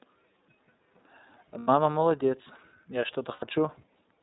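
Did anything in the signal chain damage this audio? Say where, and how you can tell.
Yes. At the codec stage, iLBC coding strips everything above 4 kHz and makes the speech plainly rough and synthetic throughout.

On the network, lost iLBC frames at 1.58 to 1.69 s and 3.33 to 3.43 s: the decoder repeats the last pitch cycle mixed with noise for about 90 ms, then recovers at once.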